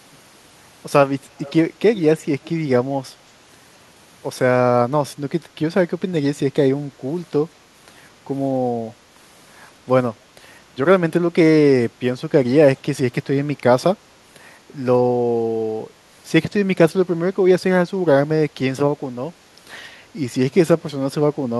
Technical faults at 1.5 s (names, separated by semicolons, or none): echo leak